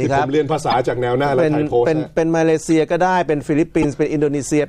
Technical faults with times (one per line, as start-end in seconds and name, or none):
0.70-0.74 corrupt frame decoded
2.66-2.69 corrupt frame decoded
3.82-3.85 corrupt frame decoded